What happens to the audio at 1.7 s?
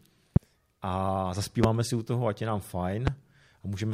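A single sharp loud pop cuts through the speech from 1.64 to 1.66 s, peaking at about 20 dB above it, just before "si u toho ať", with the speech carrying on underneath. It is likely a sudden voltage pulse, from a plug, switch, static or driver glitch, entering the signal chain.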